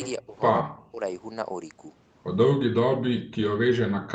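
Speech on a call, and the talker keeps getting ducked, likely speech suppressed in double talk, where the echo canceller can't tell the near voice from far-end echo and clamps down on both. It hits at 0.17 to 0.35 s (a drop of around 20 dB), 0.62 to 1.01 s (around 40 dB), and from 2.54 s right to the end, again around 40 dB deep. Through all of it the band stops at 8 kHz, as expected from the Opus call path.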